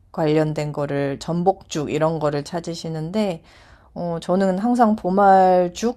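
No faults can be heard anywhere in this speech recording, from the first moment to the last.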